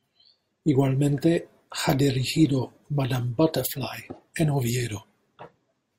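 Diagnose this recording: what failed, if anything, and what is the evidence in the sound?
Nothing failed: no stage of the chain, from capture through playback, leaves an audible mark on the speech.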